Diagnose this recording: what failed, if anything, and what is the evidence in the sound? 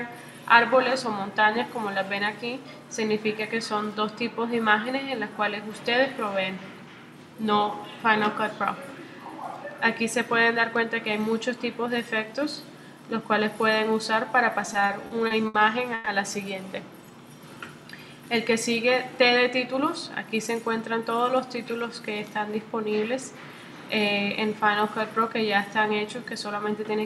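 At the network and jitter-buffer stage, packets repeatedly arrived too late between 14.66 and 15.55 s, starving the buffer seven times. The receiver stretched the last sound to fill about 190 ms, with the longest gap 70 ms. That is repeated stalls (stutter): the audio drags and hitches.

A brief call audio freeze sits at 15.94 to 16.07 s. For 120 ms the sound is held as a continued, decaying tone with no drop to silence, then resumes where it stopped. This was likely a late packet burst adding 120 ms of delay.

Afterwards the jitter buffer was carrying surplus audio, so between 19.10 and 20.07 s the receiver trimmed pitch-period slices, about 50 ms in total. This jitter buffer speed-up plays that stretch at 104% speed with unchanged pitch.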